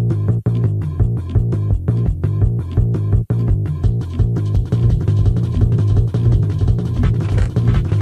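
From 4.56 s to the end, a doubled audio track: a copy about 0.7 s late, some 5 dB down, likely a second path, repeats every waveform shape.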